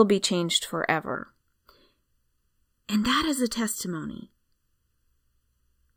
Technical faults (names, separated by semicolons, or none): channel delay (comb filtering)